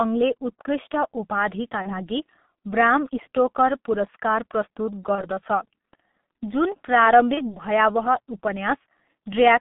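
A short speech recording carried over a G.723.1 codec link, and it's heavily degraded throughout. The band runs only from about 150 Hz to 3.6 kHz, so everything sounds muffled, and the slow-updating low-rate voice model (the sound fits roughly 6.3 kbit/s) leaves the voice hoarse with smeared consonants. There's also VoIP packet loss concealed by the speech codec at 1.82 to 2.01 s, 5.15 to 5.25 s and 7.34 to 7.57 s. Each gap fits a single lost 30 ms frame. The decoder fills it by repeating its last pitch and filter at falling gain, giving a brief, fading smear. Because each frame builds on the one before, the voice stays weak and distorted well past the gap, which is why each disturbance lasts roughly 100 to 220 ms.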